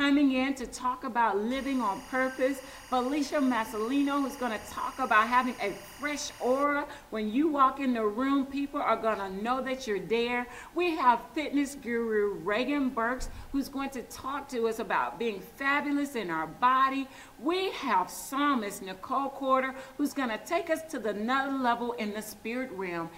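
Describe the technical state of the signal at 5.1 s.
A steady chirping warble sits roughly 20 dB beneath the sound from 1.51 to 6.64 s, flipping between pitches near 1 and 2 kHz. This is timecode bleed: a square-wave linear timecode, fitting 23.976 frames per second, leaking from an adjacent track or cable.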